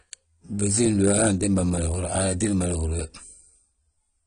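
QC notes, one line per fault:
Throughout, AAC compression: nothing above 10.1 kHz, so the speech sounds dull, with plainly audible smearing and warble. That's likely AAC-LC at around 32 kbps.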